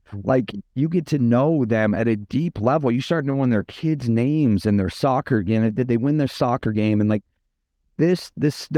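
Between 1.81 and 2.66 s there are scattered short gaps: about five tiny holes where packets went missing or arrived too late, each patched by extending the sound just before it. Together they fill roughly 50 ms, none much longer than about 10 ms, so the speech stays clear but picks up small ticks and hiccups. On a spectrogram these appear as thin smeared columns where the harmonics freeze briefly instead of moving.

From 3.17 to 4.50 s a jitter buffer slow-down stretches the speech to about 95% speed. The receiver was short of buffered audio and built up a reserve by repeating single pitch periods and bits of pauses, adding 80 ms in total. The pitch stays the same but syllables sound drawn out. On a waveform the repeated cycles show as identical periods placed one after another, and the spectrogram shows harmonics running longer and flatter than the surrounding speech.

Between 6.67 and 7.00 s a jitter buffer speed-up does the opposite, running the speech at about 111% speed. 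Too much audio had built up in the buffer, so the receiver cut out short pieces of one or a few pitch periods, removing around 50 ms. The pitch holds, but this short stretch sounds hurried. On a spectrogram the formant movements and syllable spacing look compressed in time, and the waveform shows cycles missing at the splice points.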